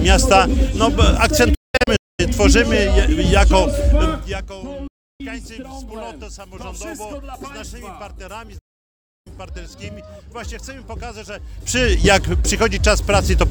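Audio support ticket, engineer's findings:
Digital broadcast dropout, 1.54 to 2.20 s: several short mutes spread over about 640 ms, about 480 ms missing in total, longest hole about 224 ms. 4.87 to 5.21 s: about 320 ms muted. 8.58 to 9.27 s: about 672 ms muted. Receiver/decoder muting on failed frames, with fast 8 ms fades. The hole lengths are multiples of about 32 ms, which fits whole-frame muting. Not an edit or cable fault: the audio comes back later in the programme and the missing material is gone, not shifted.

Zipper noise, 4.08 to 4.46 s: fine ticking rides on the sound during a fall of about 20 dB. Gain stage applying the change in unsmoothed 1 dB steps at about 50 steps per second. Each step is a small click. This is distinct from crackle, because the ticks are regular and only occur while the level moves.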